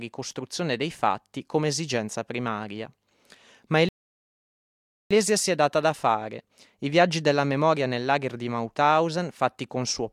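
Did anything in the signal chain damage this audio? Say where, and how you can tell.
Yes. At 3.89 s the speech cuts to dead silence and stays silent until 5.11 s, when it picks up at exactly the point it left off, with "si è data da" following. No syllable is missing or repeated, so the gap is about 1.22 s of added time rather than lost material. That is a rebuffering stall at the playback stage: the player used up its downloaded audio, waited for more to arrive over the network, and then carried on from the same position.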